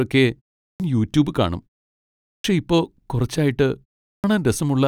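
Speech with clipped starts after pauses at 0.66 s (before "യൂട്യൂബ് കാണും"), 2.31 s (before "ഇപ്പോ കുറച്ചായിട്ട്") and 4.09 s (after "ഇപ്പോ കുറച്ചായിട്ട്"), each swallowing about 130 to 150 ms of onset while the output wakes from sleep. Unlike muted pauses, which drop only background, these cuts remove the sounds that begin each word.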